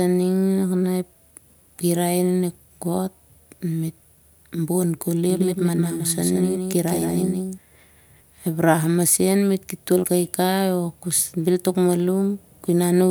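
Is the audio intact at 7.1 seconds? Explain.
No. At 7.1 seconds the speech falls inside a doubled audio track that runs from 5.3 to 7.58 s, beginning just after "bon koli". A second full-band copy of the same speech sits roughly 150 ms behind the original and about 5 dB quieter, likely from a slower duplicate capture path mixed back in. It has no reverberant tail or room colouring, so each syllable gets a dry, distinct slap, and the copy appears and disappears abruptly at the span's edges.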